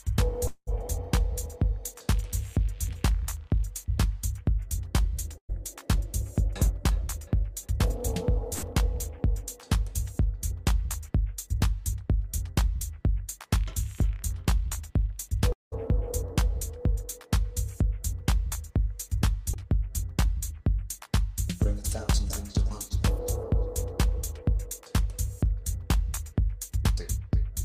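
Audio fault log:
Throughout: sample clock jitter. The converter's timing wanders by a few microseconds, so each sample lands slightly off time. Steep, fast-moving parts of the waveform suffer most. The result is a faint hiss or roughness, around 35 dB below the signal, rising with loud and bright passages.
0.47–0.69 s and 15.52–15.74 s: long network dropout. About 0.2 s of audio is missing each time. The last sound is carried on as a buzz or hiss that fades out, leaving silence for about 60 ms and then about 170 ms. A likely stall in delivery caused this. Playback resumes past the lost part.
5.38–5.51 s and 8.54–8.64 s: burst of packet loss. About 120 ms and then about 80 ms never arrived in time. The receiver extends the preceding sound and turns it down, so it becomes a held, fading buzz or hiss. The first gap ends in about 80 ms of silence before the audio jumps forward.
19.54–19.60 s: short concealed packet loss. 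Roughly 20 ms failed to reach the decoder. The receiver patched the hole by continuing the previous sound, adding about 10 ms of synthetic fill, then blended back in. It is heard as a brief smear or wobble.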